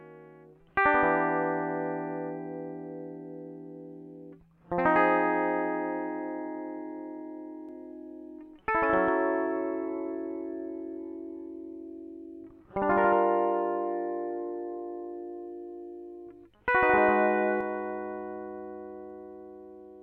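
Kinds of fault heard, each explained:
Doubled audio track: From 7.69 s to 17.61 s the music is heard twice, with a second full-band copy trailing the original by about 150 ms. The copy sits roughly 5 dB below the original. It is dry and unchanged in tone, with no decay or room sound, so it reads as a separate slapback rather than reverb. It starts and stops abruptly. The likely cause is a second capture path or an edit holding two misaligned copies.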